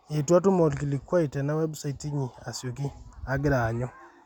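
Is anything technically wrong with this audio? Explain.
No, nothing technically wrong is audible in this speech recording.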